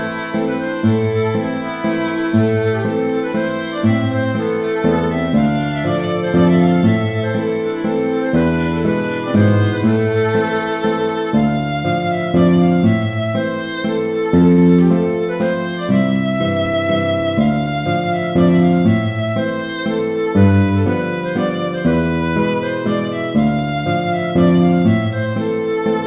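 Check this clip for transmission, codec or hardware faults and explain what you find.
One fault shows up: a short stall from a late packet. The sound already sits inside a narrow call-codec band with nothing above 4 kHz, which fits G.711 mu-law at 64 kbps.

At 14.52 to 14.60 s, a packet arrived late and the jitter buffer ran dry. The receiver held the last sound for 57 ms, then resumed exactly where it had stopped. The result is a brief held, faintly buzzy smear. Unlike a packet-loss dropout, no audio is skipped; playback simply runs 57 ms later afterwards.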